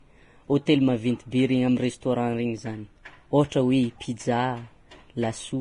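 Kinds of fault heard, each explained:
Vorbis compression: throughout the speech, the treble is rough and hissy, sibilants sound grainy and consonant onsets are smeared, with nothing above 10.5 kHz. This is likely heavy Vorbis encoding at a low rate, around 30 kbps. The codec keeps a smooth spectral envelope and quantises the detail on top of it so coarsely that fine high-frequency structure turns into noise-like texture. It also removes the top band entirely.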